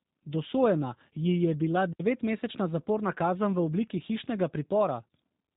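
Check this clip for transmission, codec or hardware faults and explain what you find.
One codec fault runs through the whole clip.

G.729 codec, throughout: the speech has been squeezed through a low-rate speech coder that models each 10 ms frame as a vocal tract filter and a pitch predictor driven by a few pulses. The result is consistent with G.729A at around 8 kbit/s. Everything above 4 kHz is gone, so the speech sounds narrowband and dull. The pulse-based excitation gives it a plainly audible rough, buzzy, synthetic edge, though it stays intelligible.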